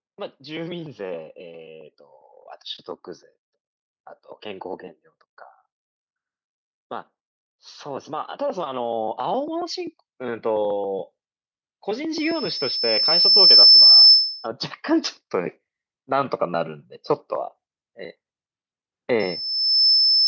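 From 7.48 to 10.94 s, automatic gain rising lifts the level by about 7 dB. The control judged the input too quiet and turned it up steadily, so speech and background swell together. The waveform envelope widens gradually across those seconds.

At 12.13 s a loudspeaker feedback squeal begins. The microphone catches its own loudspeaker output, and at 5.3 kHz the loop gain passes one. Over roughly a second and a half that single tone grows well above the speech, then stops at 14.48 s. On a spectrogram it is a bright horizontal line at 5.3 kHz, below the empty region above 8 kHz. The squeal returns at 19.19 s at the same 5.3 kHz. This time it builds in under a second, sits only a little above the speech, and runs to the end at 20.27 s.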